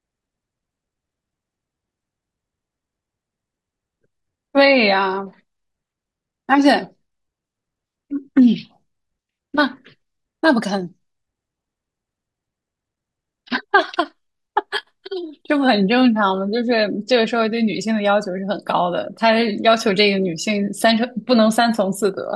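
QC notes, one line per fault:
No faults heard.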